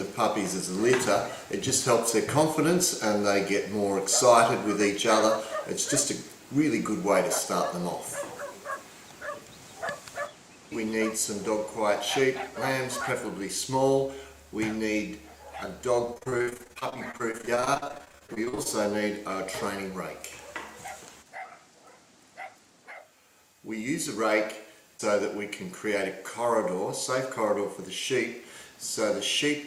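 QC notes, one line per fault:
16.05–18.67 s, repeated packet loss (robotic sound): across this stretch of about 2.6 s, some forty short gaps open one after another, the longest about 57 ms. Each is patched by stretching the preceding sound, so roughly a third of the span is concealment rather than real audio, which gives the choppy, robotic texture. Unlike a single dropout or a click, the damage is a rapid run of holes that are filled rather than left silent.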